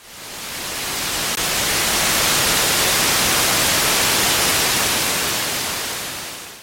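At 1.35 s the sound breaks off for about 19 ms: a gap at a join of encoded pieces. The audio was encoded in separate chunks, here about 6 s long, and joined without trimming, so one chunk's padded final frame meets the next chunk's start-up delay. It sounds like a brief dropout, and the sound then resumes where it stopped. On a waveform it shows as a short collapse in amplitude; on a spectrogram, a thin vertical band with softened edges.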